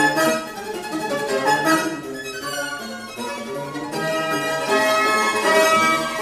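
From start to finish the audio is read two samples at a time (double speed): the reader treats each pair of samples as one frame, as though the data held two channels or wider samples. Everything plays at 2.0 times speed, pitched an octave higher.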